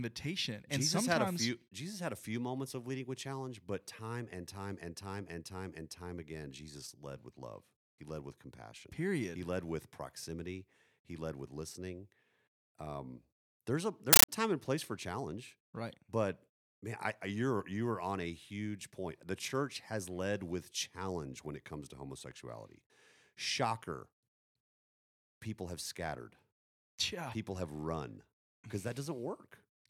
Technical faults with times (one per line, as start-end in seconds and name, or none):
14.13-14.29 compressed stream played as audio